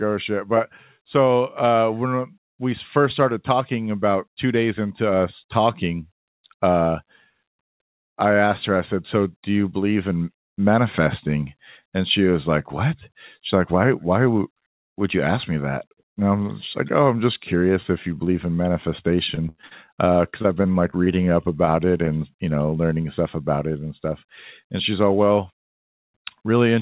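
Speech with repeated packet loss (robotic sound) in three bursts: 19.32–19.90 s, 20.30–21.08 s and 21.65–22.09 s, ending just before "you know learning stuff". Lost packets are patched by extending the previous sound, giving choppy stretches with pieces missing, with gaps up to 86 ms. The band stops at 4 kHz, which fits a narrowband G.711 call path.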